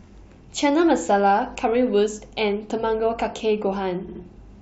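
At 4.08 to 4.22 s the speech stutters from repeated frames: a 69.7 ms block, which fits a short run of codec frames, plays twice more, adding 139.3 ms. On a spectrogram the same patch appears three times side by side.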